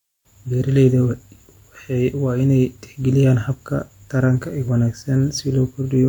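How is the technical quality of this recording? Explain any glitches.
Nothing in this speech recording stands out as a technical problem, so there are no glitches to explain.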